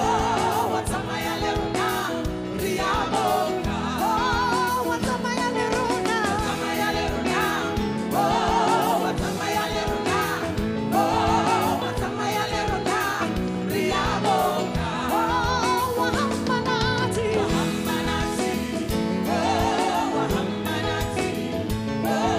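No technical faults are audible.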